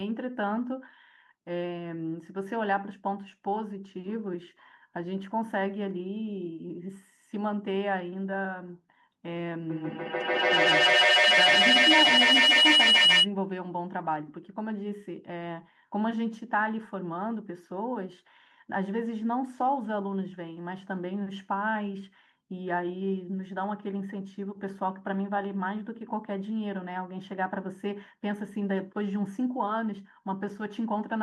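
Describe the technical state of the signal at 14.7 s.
At 14.7 s the speech signal is intact, with no audible dropout, clipping, glitch or other fault at that moment.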